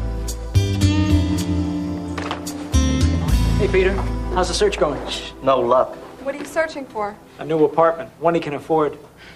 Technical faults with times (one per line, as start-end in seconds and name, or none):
0.00-9.35 computer activity noise